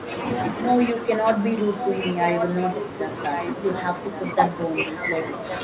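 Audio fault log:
0.06–0.4, 1.79–2.01, 2.19–3.06, 3.33–3.47 and 4.79–5.03 s: echo leak, a copy of the speech returning about 1.12 s late, sometimes nearly as loud as the voice, likely from a loudspeaker echo canceller letting it through.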